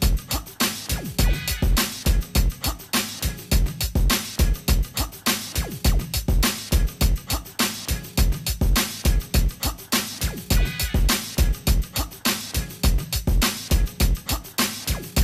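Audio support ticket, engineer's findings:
No faults found on listening; nothing to report for this ticket.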